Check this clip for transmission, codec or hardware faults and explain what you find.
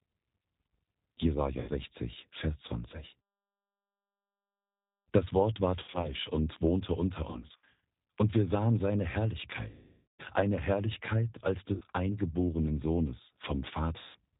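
Two faults are audible: coarse low-bitrate codec sound throughout, and six bursts of concealed packet loss.

The G.729 codec, heard throughout: the speech is dull, with nothing above 4 kHz, and rough and slightly synthetic. This is G.729A at 8 kbit/s, which rebuilds each 10 ms frame from a vocal tract filter, a pitch predictor and a few pulses.

VoIP packet loss concealed by the speech codec, at 1.6–1.71 s, 5.8–6.15 s (just before "und wohnte unter"), 7.31–7.69 s (between "und wohnte unter" and "und wir sahen seine"), 9.69–10.23 s, 11.73–11.83 s and 13.99–14.17 s: the sound smears into fading buzz, worst in the half-second gap at 9.69 s. The decoder stretched its last pitch and filter across the missing audio, which fits 20 ms packets.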